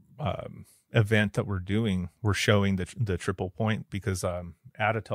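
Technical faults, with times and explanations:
No technical faults are audible in this speech recording; the signal stays continuous across the whole clip.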